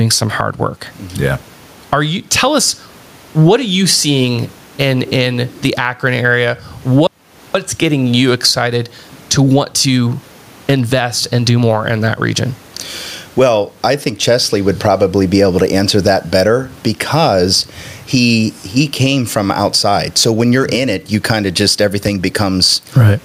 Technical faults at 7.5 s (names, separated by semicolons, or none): gain pumping; audio dropout to silence